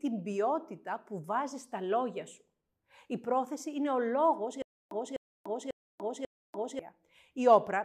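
At 4.62 s, just after "πρόθεση είναι ο λόγο", the speech breaks into a stutter with silent gaps lasting until 6.79 s. A fragment of about 252 ms plays, then about 291 ms of dead digital silence follows. The cycle repeats every 543 ms, four times in all. The likely cause is a stalled player or stream replaying its last buffered piece at each retry before running dry. The speech meant for that stretch never arrives.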